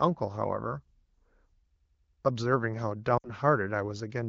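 Speech carried over an AMR-WB (HD Voice) link at 15.85 kbit/s, with light codec coloring, shows two faults. From 1.77 to 2.23 s a system hang loop occurs: the machine or driver stalled while the audio hardware kept replaying its ring buffer, so one 93 ms slice repeats about five times as a machine-gun stutter at 10.8 Hz, which fits a 4096-sample buffer. From 3.18 to 3.29 s lost AMR speech frames appear: about 60 ms of corrupted radio frames, which fits three 20 ms frames, forced the decoder to reuse its last good parameters at falling gain, so the speech drops to near silence within two frames and comes back weak or rough for a moment.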